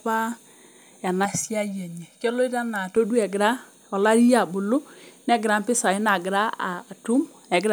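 Hollow, phasey speech from 1.25 to 2.96 s, with a fixed notched colouring, is channel delay (comb filtering). One channel arrives roughly 1.5 ms late, and summing to mono cancels shared content at evenly spaced frequencies, the first near 400 Hz.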